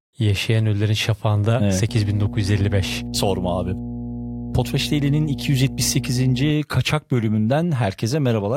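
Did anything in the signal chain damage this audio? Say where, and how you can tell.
Yes. Mains hum enters in the analogue wiring from 1.89 s to 6.51 s: a steady 60 Hz tone, roughly 10 dB below the speech, coupled in by a ground loop or nearby transformer. A spectrogram shows a flat line at 60 Hz with some low harmonics, and the waveform carries a constant low ripple.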